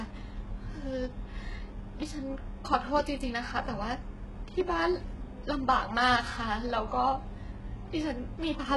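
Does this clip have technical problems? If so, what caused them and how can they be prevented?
Yes. Throughout the speech, s sounds turn gritty and metallic, and nothing is heard above 11.5 kHz. The likely cause is heavy HE-AAC compression at a rate that fits about 12 kbps. The treble is rebuilt from copied lower bands, so it is not the original. A higher bitrate prevents this.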